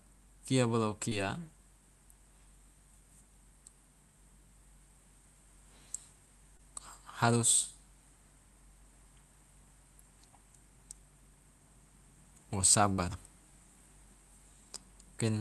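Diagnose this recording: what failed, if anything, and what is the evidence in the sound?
Short concealed packet loss in the network: speech at 1.09–1.13 s and 6.57–6.61 s arrived too late, so the decoder extrapolated the gaps, leaving brief smears.

A burst of packet loss from 12.93 to 13.00 s loses about 40 ms; concealment holds and fades the last sound before speech resumes further on.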